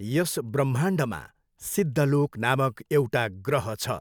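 Nothing stood out on listening to this short speech recording.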